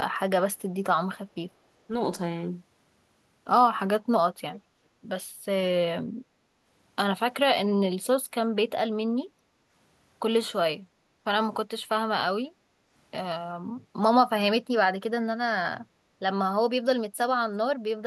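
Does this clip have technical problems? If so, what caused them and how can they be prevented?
Yes. From 4.53 to 4.6 s a faint, delayed copy of the speech returns about 384 ms late, roughly 25 dB down: likely an echo leak from a loudspeaker-side echo canceller. Using a headset on the far end, or better echo cancellation, prevents it.

At 9.29 to 9.4 s, 10.83 to 11.24 s and 12.51 to 12.9 s, the room sound briefly dips about 6 to 7 dB: background gated by the echo canceller suppressing the microphone while its loudspeaker played. Less aggressive suppression or a headset prevents this.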